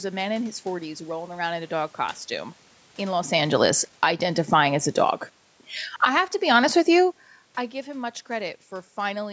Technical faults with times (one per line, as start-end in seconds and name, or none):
3.31-4.19 automatic gain falling
4.10-5.37 automatic gain rising
5.89-6.21 automatic gain falling
6.12-6.88 automatic gain rising